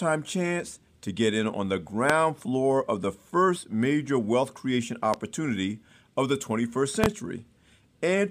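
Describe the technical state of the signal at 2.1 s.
Right at 2.1 s there's a loud pop, a single sharp thump from about 2.10 to 2.14 s, landing between "get in on the" and "floor of the first". It jumps roughly 25 dB above the speech. It's likely a voltage spike from a plug, switch or static discharge, with the speech carrying on underneath.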